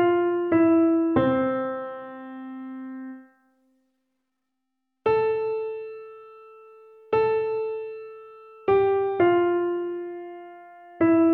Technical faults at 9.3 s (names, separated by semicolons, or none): none